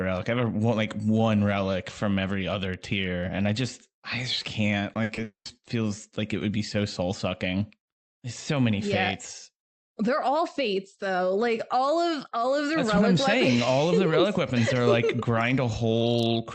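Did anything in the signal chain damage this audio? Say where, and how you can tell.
Yes, at the network stage. Short concealed packet loss at 4.93–4.97 s and 5.15–5.19 s: 20 ms went missing each time, patched over as brief smears.

A burst of packet loss at 5.03–5.11 s lost 60 ms, and the receiver stretched the last sound into a fading buzz or hiss before jumping ahead.

From 5.23 to 5.47 s, 220 ms vanished. The concealment tails off into about 120 ms of silence, most likely a long network dropout.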